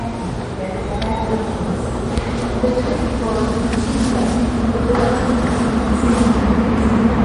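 All the way through, the sound turns watery and swirly with nothing above 10.6 kHz, likely MP3 compression starved of bits, which fits a bitrate around 40 kbps.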